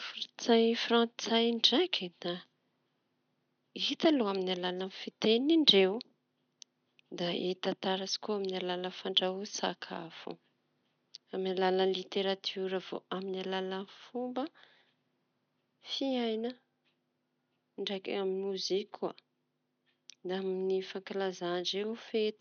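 There are no technical faults to describe at any point, and the only background sound is room noise sitting about 51 dB below the speech.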